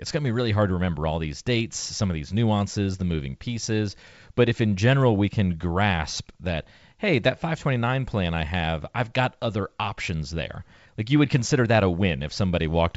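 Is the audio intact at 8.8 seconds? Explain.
Yes, at 8.8 seconds the speech is intact, carried by G.722 wideband telephone coding at 64 kbit/s with no fault heard at that point.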